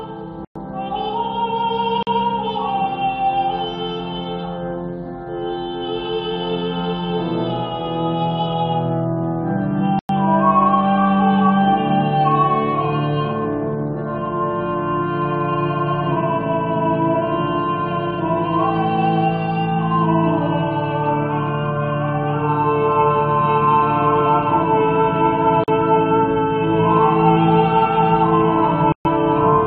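At 0.45, 2.03, 9.99, 25.64 and 28.92 s the sound cuts to blocks of digital silence of 107, 43, 101, 43 and 128 ms. The 43 ms holes fit a 2048-sample buffer left unfilled. Unlike a faded dropout, each cuts out and back with no fade.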